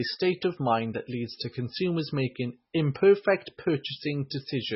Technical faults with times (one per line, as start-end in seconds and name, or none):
0.00-4.75 MP3 compression